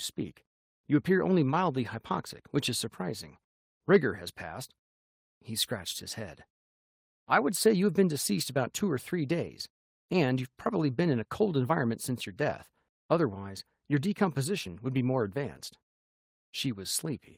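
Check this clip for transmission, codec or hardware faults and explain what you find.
No transmission, codec or hardware faults.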